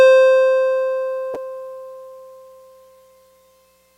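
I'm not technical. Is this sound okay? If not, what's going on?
No. There is damaged data in the compressed stream at about 1.33 to 1.36 seconds, heard as a brief glitch in the music lasting under a twentieth of a second. The music was stored in a compressed form, and a small stretch of that stored data is wrong. When the player reaches it, it can't read those pieces properly, loses its place, and has to hunt for the next readable chunk before the music carries on.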